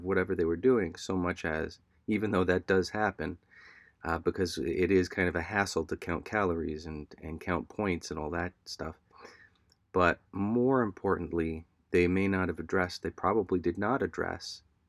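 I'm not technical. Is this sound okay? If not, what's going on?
Yes, no technical faults are audible anywhere in this speech recording.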